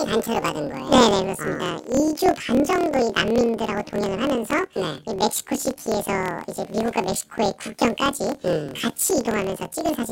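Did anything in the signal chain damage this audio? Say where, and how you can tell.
Yes. The damage is at the sample-format conversion stage, where planar audio is read as interleaved, and it runs through the whole speech clip. Each 26.12 ms block plays twice at double speed, first the left half and then the right. The speech is therefore an octave high, 12 semitones, with a flutter at the 38.3 Hz block rate, while the overall pace stays correct. A plain resampling error would shift the pitch but would not produce that block-rate flutter.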